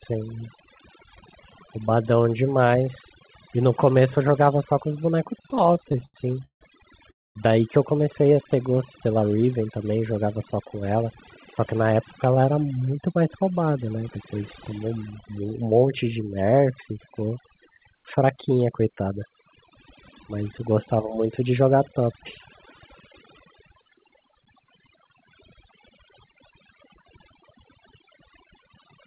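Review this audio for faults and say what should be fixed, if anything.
Overdone noise removal runs through the whole speech clip. The background sinks to near silence with twinkling specks. The suppressor was set too aggressively, so it pulls down quiet parts of the voice along with every band near its noise estimate. Lower the reduction strength and keep some residual noise floor.

Repeated stalls (stutter) occur between 5.38 and 6.63 s. The speech drags and stutters through 19 short holds totalling 409 ms, a third of that span, with the longest at 160 ms. Late packets kept draining the jitter buffer, and the receiver stretched the last sound each time. Give the jitter buffer more headroom on this unstable link.

A call audio freeze happens from 7.11 to 7.37 s. The sound stops for about 220 ms of near silence and then resumes without anything lost. The likely cause is delayed packets emptying the buffer, which added roughly a quarter second of delay. 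Fixing the network delay spikes would prevent it.

A jitter buffer slow-down runs from 8.22 to 8.80 s. The speech plays at 88% speed with unchanged pitch, drawn out by 78 ms of repeated pitch periods. The receiver was rebuilding a depleted buffer. A steadier buffer target would avoid these stretches.

Jitter buffer speed-ups occur at 10.81–12.59 s (107%), 18.23–19.11 s (110%) and 27.65 s to the end (104%). The speech runs faster at the same pitch, sounding hurried in the first two, losing around 150, 100 and 70 ms respectively as the receiver trimmed pitch periods to shed excess delay. Smoother packet delivery would remove the need for these. The audio is band-limited to 4 kHz, which fits the G.711 codec on the call path.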